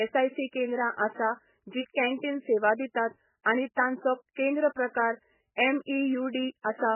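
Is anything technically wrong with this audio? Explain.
Yes. Throughout, the speech is dull and watery, with nothing above 3 kHz. This is likely heavy MP3 compression at a very low bitrate, which cuts the treble and drops weak frequency lines so they switch on and off between frames.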